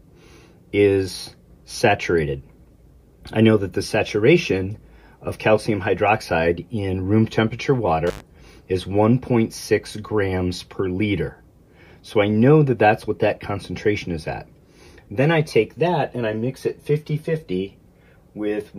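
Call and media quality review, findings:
Intermittent contact at 8.07–8.20 s: about 73 ms dropout, crackle at both edges, faint hiss in the gap. Looks like a loose cable or plug briefly opening the line.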